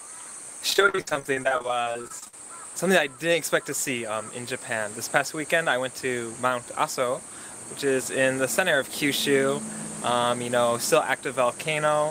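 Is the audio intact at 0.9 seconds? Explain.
No. From 0.70 to 2.37 s there is repeated packet loss (robotic sound): more than two dozen gaps, none longer than 60 ms, each patched by stretching the preceding sound. About a third of that span is filler, so the audio turns choppy with pieces missing.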